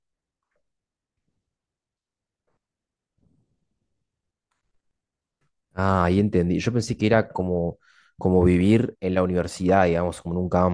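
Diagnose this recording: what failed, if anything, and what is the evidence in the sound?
Nothing in the speech signal points to a failure at any stage, from capture and conversion through processing, transmission and playback, with level, continuity and timing holding steady throughout.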